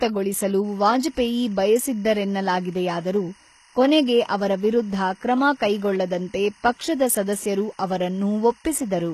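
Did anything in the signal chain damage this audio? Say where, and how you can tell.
Yes. The codec stage shows clearly audible damage throughout the speech. The treble sounds gritty and lispy and stops dead at 12.3 kHz, likely from HE-AAC compression at a very low bitrate around 16 kbps. On a spectrogram the upper bands look copied from below, with smeared, misaligned harmonics.

Timecode bleed enters in the analogue wiring at 0.65 s and runs to the end: a steady chirping warble roughly 30 dB under the speech, leaking from a neighbouring line. A spectrogram shows alternating lines near 1 and 2 kHz, switching in a pattern that fits 24-frame code.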